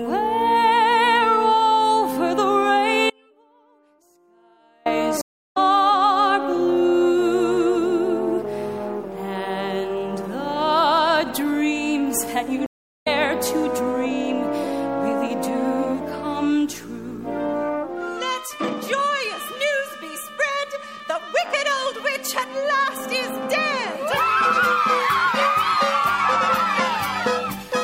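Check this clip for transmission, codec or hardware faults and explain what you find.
Three faults are audible: one dropout and two stream reconnects.

Audio dropout to a faint residue, 3.10 to 4.86 s: the wanted signal is likely lost for about 1.76 s while the path stays live, leaving a faint leak about 35 dB down, cut abruptly.

Stream reconnect, 5.21 to 5.57 s and 12.66 to 13.08 s: the connection breaks, the player goes silent for 344 ms and 396 ms, then a fresh decoder resumes roughly 0.2 s and half a second further on.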